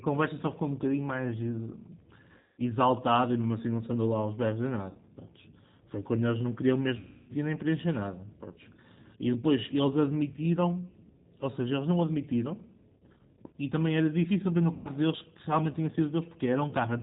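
Throughout, the sound is band-limited below 4 kHz and rough and synthetic, which points to the 8 kbit/s G.729 codec rebuilding speech from pulses and a filter, not simple low-pass filtering. At 2.38–2.62 s, 4.89–4.98 s, 6.99–7.33 s and 14.73–14.89 s, VoIP packet loss concealed by the speech codec smears the speech into a fading buzz or coloured noise rather than a clean silent gap.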